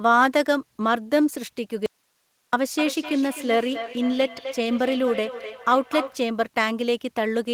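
The signal path likely lost its source for a moment while everything downstream stayed live, producing an audio dropout to a faint residue from 1.86 to 2.53 s. The speech cuts out abruptly for about 0.67 s, leaving only hiss roughly 45 dB below the speech.

From 2.72 to 6.27 s, a second device in the room replays what this microphone sent, and the microphone picks it up again. The result is feedback echo between two devices: each word returns at intervals of roughly 300 ms, thinner and more ringing each time, peaking about 11 dB below the direct speech.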